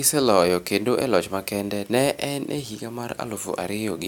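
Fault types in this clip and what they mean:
No faults are audible anywhere in this speech recording.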